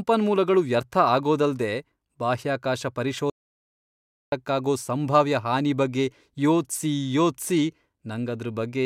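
Speech, with an audio dropout to silence from 3.30 s to 4.32 s. Right after "ವ್ಯರ್ಥ ಆಗೋದಲ್ದೇ ಬಾಹ್ಯಾಕಾಶ" the signal cuts out mid-flow and roughly a second is lost, about 1.02 s of silence with no room tone, before the audio resumes abruptly at "ಸಂಭಾವ್ಯ ಹಾನಿ ಬಗ್ಗೆ ಯೋಚ್ಸಿ". The likely cause is a momentary loss of the input, such as a disconnected device, a failed link or an accidental mute, while the recorder kept writing silence.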